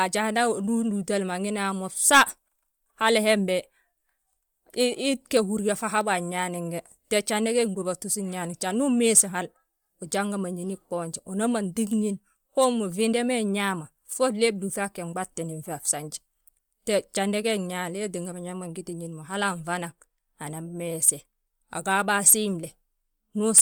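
Throughout the speech, the sound carries plainly audible codec damage, likely from Bluetooth LC3 compression. The codec cuts the signal into short frames, which here fit 10 ms frames. It quantises each frame's spectrum to a modest bit budget, consistent with roughly 48 kbps, and this leaves a breathy, grainy edge on the voice. On a spectrogram, the upper bands look patchy and blocky frame to frame, with nothing above about 20.1 kHz.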